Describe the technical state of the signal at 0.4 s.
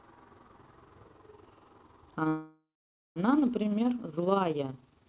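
At 0.4 s the speech has a fast, rough flutter, a rough tremolo with the level dipping by about 6 dB around 20 times a second. This overlap-add ripple runs through the whole clip. The audio was split into windowed frames and rejoined with an overlap whose gains don't sum to a constant, so the level swells and sags once per frame. Underneath, the narrow band stopping at 4 kHz fits a G.711 mu-law call path at 64 kbps.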